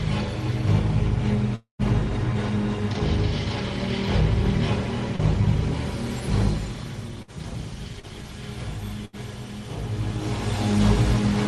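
From 1.55 to 1.82 s the audio is most likely interrupted by a long network dropout. About 200 ms of sound never arrives. The receiver stretches the last sound into a fading buzz or hiss over roughly 234 ms, and about 130 ms of that decays into near silence before the audio resumes without the lost portion. The return lands slightly off the earlier timing, by something like 30 ms, as the playout delay readjusts.

At 5.16 to 5.22 s there is a short concealed packet loss. About 40 ms of audio failed to reach the decoder in time, so the receiver extrapolated from the preceding sound for roughly 33 ms and then blended back into the real signal. What you hear is a brief smear or wobble where that fragment should be, lasting only a few hundredths of a second.

Between 7.22 and 9.16 s the connection loses packets repeatedly, producing the choppy sound of repeated packet loss. Three separate gaps occur, the longest about 76 ms, adding up to around 160 ms of missing audio. 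Each hole is patched by continuing the last sound, so about 8 percent of this stretch is synthetic fill. The result is a choppy quality with pieces dropped out. The gradual level changes in the clip are ordinary fader moves.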